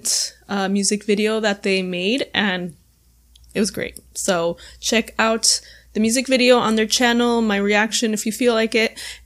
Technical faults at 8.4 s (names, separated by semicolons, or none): none